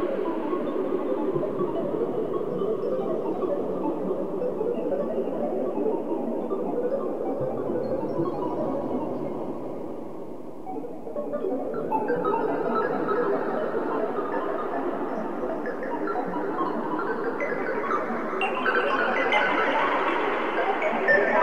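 Nothing is technically wrong with this recording of sounds.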